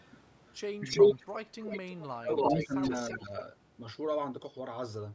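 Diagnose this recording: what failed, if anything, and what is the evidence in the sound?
Echo leak at 0.00 to 0.07 s, 0.88 to 2.07 s and 2.36 to 3.42 s: a delayed copy of the speech returns about 330 ms behind the original (326, 330 and 334 ms). It is barely audible at first, at about 35 dB below the speech, then about 10 dB louder than the speech, and finally about level with it. This is a call-processing failure, likely a far-end loudspeaker whose echo canceller let residual echo back into its microphone.

Speech suppressed in double talk at 1.63 to 1.73 s, 2.17 to 2.90 s and 3.14 to 3.35 s: the talker's level dips by about 10 dB, then by about 25 dB over roughly half a second, then by about 10 dB again. These dips coincide with or border the loud echo stretches. This is also at the call-processing stage. The canceller likely could not separate the talker from the returning echo while both were present, so it attenuated everything.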